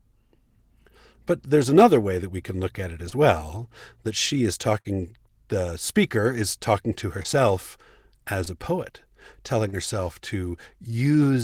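At 3.09 s, short concealed packet loss: about 20 ms never arrived, and the receiver extended the preceding sound, leaving a brief smear. At 4.80 to 4.87 s, a burst of packet loss drops about 40 ms, bridged by a fading continuation before the audio resumes further on. Further short concealed losses at 7.23, 8.44 and 9.68 s (the last about 40 ms) give similar momentary wobbles.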